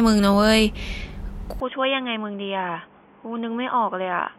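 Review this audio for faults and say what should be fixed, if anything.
At 1.6 s the input likely switched to a poorer device: the speech then loses everything above 3.5 kHz, turns noticeably quieter and gains faint new noise. Lock recording to one fixed input device and disable automatic switching to headset call profiles.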